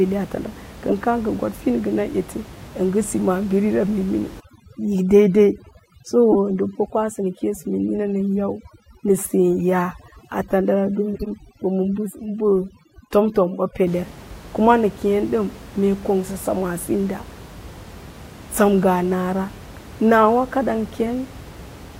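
A speech recording with two kinds of fault. Corrupt frame decoded: at 0.89 to 0.92 s, 6.32 to 6.36 s and 11.13 to 11.27 s, damaged compressed frames were played anyway, so misread gains and codes put energy at the wrong frequencies. The result is short chirps and noise bursts: the first reaches roughly -10 dBFS and sounds like a single bad frame, the second is the loudest, and the last is longer, which points to several frames in a row. A plain click or dropout would be silence or a single spike; these carry tonal, misplaced content. Overdone noise removal: from 4.4 to 13.87 s, starting just after "si maabirira", a noise reducer set too hard switches off individual frequency bands wherever they sit near its noise estimate. The room noise, which sits about 19 dB below the speech elsewhere, collapses into near silence with twinkling specks, and the quieter parts of the speech are cut away too. 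A low-bitrate codec warbles throughout, whereas this damage begins and ends with the processing and is tied to how close each band is to the noise floor.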